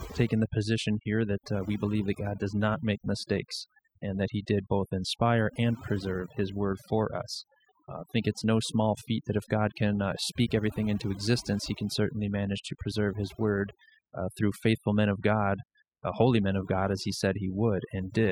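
Throughout the speech, the background drops and breaks up into twinkling specks: overdone noise removal, pulling individual frequency bands down wherever they resemble noise.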